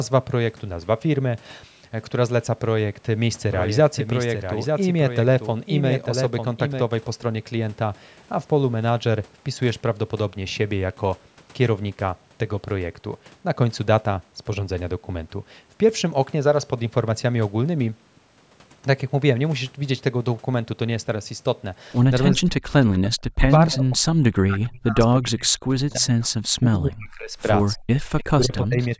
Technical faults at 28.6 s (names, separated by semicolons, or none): speech suppressed in double talk; echo leak